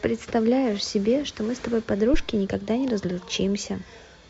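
At 2.14 to 2.21 s a deep, low thump breaks into the speech, a single knock that dies away within about 15 ms. This is a phantom power thump: the supply on a live microphone input was switched, and that sudden voltage step passed through the coupling capacitors into the signal path. Because the step carries mostly low-frequency energy, it lands as a dull bump rather than a sharp click.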